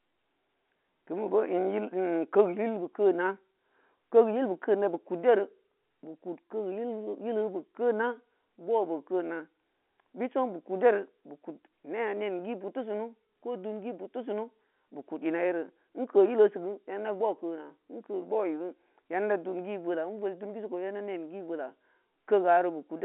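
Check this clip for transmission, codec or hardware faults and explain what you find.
Nothing stood out on listening; the speech carries the narrow band of an ordinary telephone line, with nothing above about 3.4 kHz.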